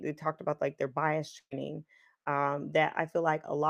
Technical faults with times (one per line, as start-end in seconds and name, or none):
1.39-1.54 burst of packet loss